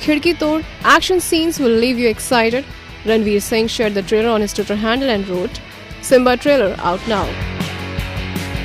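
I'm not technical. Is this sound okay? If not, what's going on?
No. There is hard clipping at 0.88 to 0.96 s and 6.13 to 6.52 s. The loudest moments overloaded, so their peaks were cut flat, adding harsh crackle.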